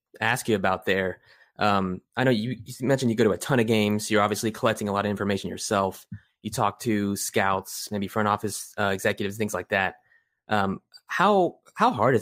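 No technical faults are audible.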